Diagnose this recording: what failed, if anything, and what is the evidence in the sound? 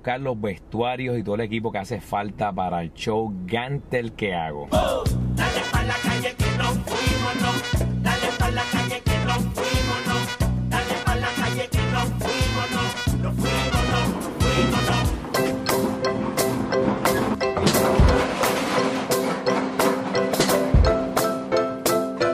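Audio missing between chunks at 4.83 s and 14.80 s, 10 s apart: about 30 ms skips, likely at recording-buffer boundaries, seen as gapless waveform splices and spectrogram seams.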